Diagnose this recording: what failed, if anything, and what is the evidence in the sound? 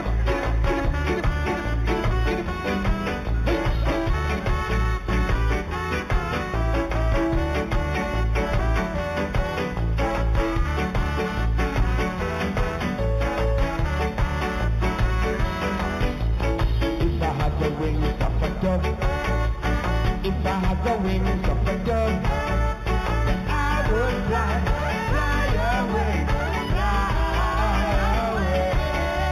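Imaging from linear upsampling at the sample-rate conversion stage: straight-line interpolation from 8 kHz to 48 kHz leaves a faint mirror image between 4 and 8 kHz throughout, heard as metallic shimmer.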